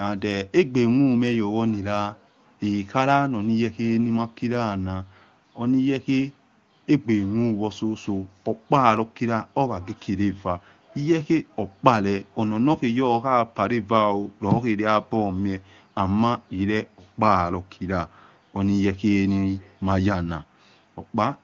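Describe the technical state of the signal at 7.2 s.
At 7.2 s the speech is intact, passing through the AMR wideband (HD Voice) codec at its top rate of 23.85 kbit/s with no fault at that moment.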